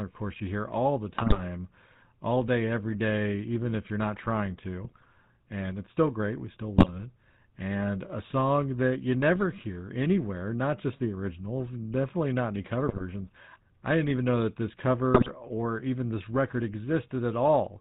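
A buzzy, gravelly roughness runs through the whole speech clip, with nothing above 4 kHz, the signature of the GSM full-rate codec at what sounds like 13 kbps: a vocal-tract model driven by sparse regular pulses. Squawks, pops and gargling then break in at 1.18–1.43 s after "you hear all the", 4.84–5.05 s after "if you're not trying", 6.76–6.89 s, 12.88–13.03 s, and 15.14–15.29 s between "even know that this" and "or even this record". These are GSM bit errors: corrupted filter, pitch or gain values distorting each hit frame.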